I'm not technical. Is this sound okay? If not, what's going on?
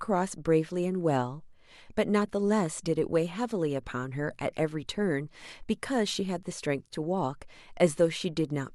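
Yes, this speech recording sounds fine, and there's nothing here to worry about.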